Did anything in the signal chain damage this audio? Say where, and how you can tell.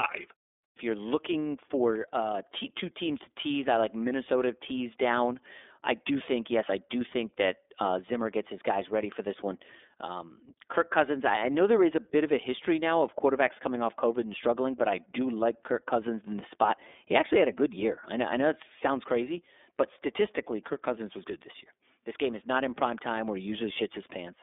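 Yes. iLBC codec damage runs throughout: nothing above 3.7 kHz, and a rough, synthetic edge from independently coded 30 ms frames, which fits its 13.33 kbps mode.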